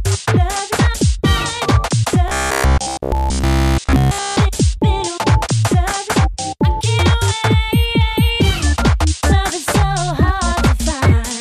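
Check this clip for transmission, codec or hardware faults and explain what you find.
One fault: robotic sound from repeated short buffers, 2.28 to 4.37 s. A rigid 66.7 Hz buzz replaces all the audio, likely from a 15 ms buffer being replayed while new data was missing.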